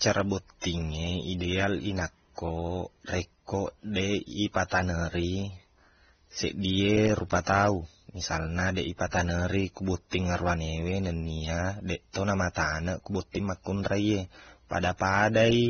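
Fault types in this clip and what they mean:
Transcoding between lossy codecs: likely Vorbis then AAC-LC near 25 to 27 kbit/s, stacking both codecs' artefacts on speech, with nothing above 6.3 kHz.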